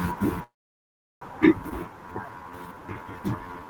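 From 0.43 to 1.23 s a call audio freeze holds the sound, then leaves most of it silent, likely from delayed packets emptying the jitter buffer; the audio resumes intact, unlike a dropout. At 1.69 to 1.72 s, a skip ahead jumps past roughly a third of a second, joining both sides almost seamlessly rather than pausing. From 1.83 to 3.66 s, a jitter buffer slow-down repeats pitch periods, stretching the speech to 84% speed while keeping pitch unchanged.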